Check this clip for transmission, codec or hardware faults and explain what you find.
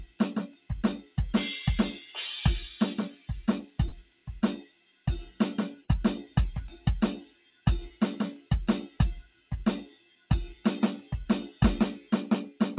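A speech-oriented noise suppressor was left running on this music, and it causes several audible faults. Two brief packet losses were also concealed by the receiver. The music reaches the listener through a narrowband call path, with nothing above 4 kHz, which fits a G.711-style codec.

Noise suppressor applied to music: throughout the clip, a suppressor tuned for speech keeps treating sustained musical content as background noise. It swings its gain by roughly 15 dB as it alternates between passing and attenuating the music. Onsets get through largely intact, but held tones and reverberant tails are pulled down. The music therefore pumps and breathes in level and sounds thin and unsteady rather than continuous.

Sound cut by the noise suppressor: the suppressor bites hardest in three spans. The first runs from 0.05 to 1.17 s, with about half a second affected and dips of about 16 dB. The second runs from 1.98 to 2.17 s, with dips of about 7 dB. 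The longest runs from 3.09 to 12.61 s, with roughly four seconds affected in total and dips of about 17 dB. In these spans, sustained and decaying material sinks or has its decay cut short, while transients survive.

Short concealed packet loss: around 3.88 to 3.95 s and 5.84 to 5.91 s, about 40 ms of audio failed to arrive in time. Each time, the receiver synthesised roughly 37 to 39 ms of replacement sound by extending what came just before, then crossfaded back into the real signal. Each event is heard as a brief smear or wobble in the music.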